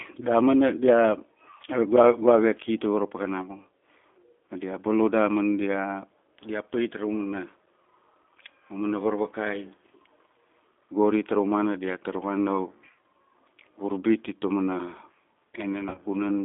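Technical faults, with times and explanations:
Throughout: G.729 codec. The speech is carried at 8 kbit/s, rebuilt from a vocal tract filter, a pitch predictor and a few pulses per 10 ms frame rather than from the waveform itself, so the codec damage is plainly audible as a rough, slightly synthetic texture. The line band runs from about 250 Hz to 3.5 kHz, removing low body and all upper detail.
15.89–16.02 s: VoIP packet loss concealed by the speech codec. About 60 ms of audio is missing, scattered over roughly 80 ms, with the longest gap 40 ms, which fits six lost 10 ms frames. The decoder fills each gap by repeating its last pitch and filter at falling gain, giving a brief buzzy tone or coloured noise that fades. Because each frame builds on the last, the audio stays weak or distorted after the gaps.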